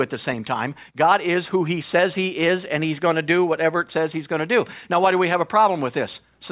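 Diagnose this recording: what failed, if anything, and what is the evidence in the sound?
Nothing in the signal chain failed: the speech signal stays continuous and level throughout, with no break, distortion or level fault at any stage of the path.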